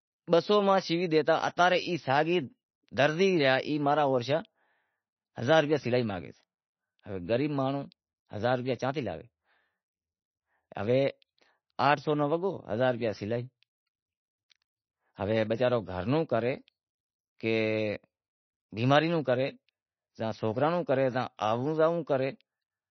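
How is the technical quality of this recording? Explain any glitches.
The technical quality is poor, with plainly audible damage throughout the speech. From start to finish, likely MP3 compression at a very low bitrate: nothing reaches above 6 kHz, and weak frequency lines flicker frame to frame, giving a watery, swirly texture that a plain low-pass filter wouldn't produce.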